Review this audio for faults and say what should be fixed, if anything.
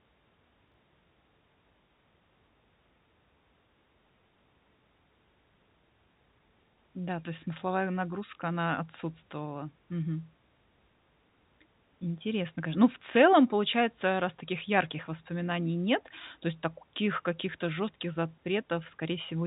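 Between 0.68 and 0.74 s the speech jumbles briefly, which points to chunks out of order. A 20 ms chunk plays two chunks late, after the ones that should follow it. This scrambles the sequence across three hard joins, but nothing goes missing. That sets it apart from packet loss, where a gap or smeared concealment replaces the audio, and from a repeated chunk, where a segment plays twice. Reordering chunks by sequence number in a jitter buffer before playback prevents this.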